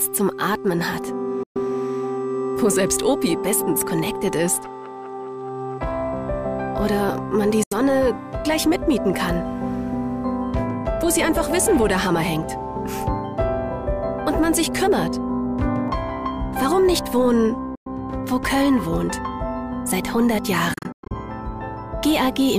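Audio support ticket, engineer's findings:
Silent gaps at 1.43 s (about 120 ms), 7.63 s (76 ms), 17.75 s (107 ms), and a broken cluster at 20.74–21.14 s. Likely Bluetooth dropout: packets lost on the wireless link. Playback skips ahead after each gap rather than resuming where it stopped.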